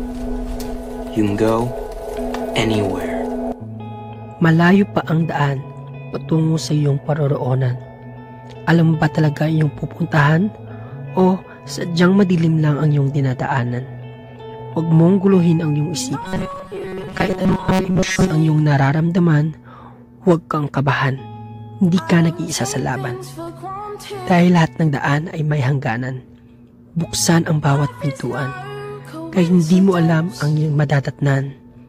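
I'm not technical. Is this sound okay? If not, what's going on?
No, there's a problem between 16.22 and 18.31 seconds. There you'll hear robotic sound from repeated short buffers: the audio turns into a stiff, metallic buzz at about 188 Hz. The likely cause is new audio arriving too slowly, so the software keeps replaying a tiny slice, around 5 ms long, to fill the gaps. Most of that stretch is those repeats rather than the real sound, which is why it's mechanical and flat.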